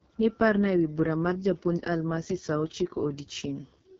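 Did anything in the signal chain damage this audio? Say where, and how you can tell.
Yes. Throughout the speech, the sound is rough and raspy, with a buzzy, grainy texture and nothing above about 7.5 kHz. This is the AMR wideband (HD Voice) codec at the codec stage, which fits its lowest 6.6 kbit/s mode, where too few pulses are available to model the vocal tract excitation.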